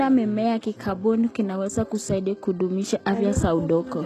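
From start to finish the speech has a plainly audible coded quality, and it's most likely HE-AAC compression at a very low bitrate, something like 16 kbps. The top end is rebuilt: the treble is copied up from lower bands rather than coded, so its harmonics don't line up with what's below. That's why the s sounds come out gritty and lispy, and nothing at all reaches above about 12.3 kHz.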